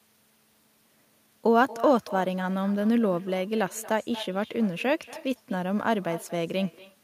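It's a speech recording, and all the way through it there's echo with no canceller. Everything said comes back roughly a fifth of a second later as a quieter, thinner copy sitting about 18 dB under the direct sound. That's the far end playing the call over a loudspeaker, its microphone catching it, and nothing stripping it out, so your own audio returns after the network round trip.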